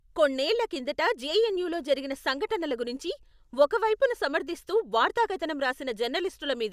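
No technical faults occur in the audio, so there is nothing to describe in time order.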